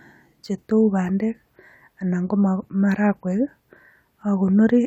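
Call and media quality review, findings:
No audible faults found in the speech recording.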